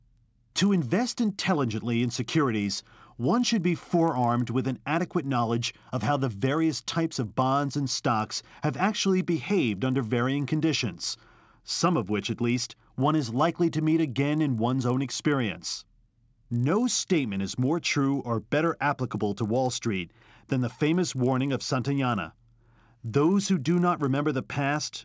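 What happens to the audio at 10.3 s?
At 10.3 s the speech carries a buzz at 50 Hz. It comes from a resampler restarted on every block, and it runs through the whole clip. Each 20 ms block is converted alone, so every block edge gets a small error. The errors repeat as a buzz that sounds only while speech is present.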